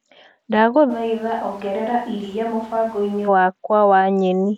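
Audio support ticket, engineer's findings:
Switch to a distant microphone, 0.92–3.27 s. Speech abruptly turns roomy and hollow, thinner bass, level down about 5 dB, room noise rising to roughly 25 dB below speech. Likely close-mic dropout, with a far mic carrying the signal until an equally sudden return.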